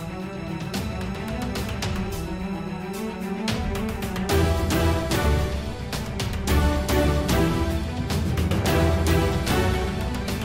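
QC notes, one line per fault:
No faults found on listening, with nothing to flag at any point in the audio.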